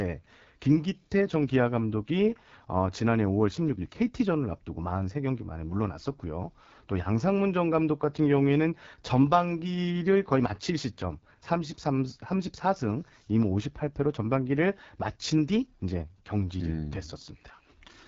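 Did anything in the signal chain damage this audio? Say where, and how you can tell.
Yes, at the codec stage. The whole clip runs through the AMR wideband (HD Voice) codec, and the damage is plainly audible throughout. The speech has that rough, raspy edge that AMR-WB gets when it's starved of bits, which points to one of its bottom rates, around 8.85 kbit/s. At that rate the pulse-driven vocal tract model can't track the voice cleanly below 6.4 kHz. Above that there's only synthetic shaped noise, and nothing at all past 7.6 kHz.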